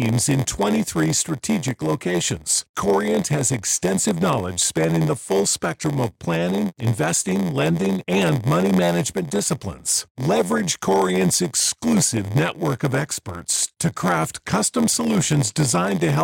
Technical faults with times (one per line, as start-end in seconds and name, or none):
0.00-16.24 block size mismatch (padded)